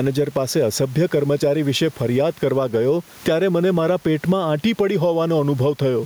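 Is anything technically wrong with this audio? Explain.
Yes. Gain pumping runs through the whole speech clip, with the gain swinging by about 10 dB; the room noise sits about 34 dB below the speech. The likely cause is input gain set far too high, with a fast limiter or compressor clamping down on each peak and releasing in the gaps. The result is a squashed, breathing sound with little difference between loud and soft passages.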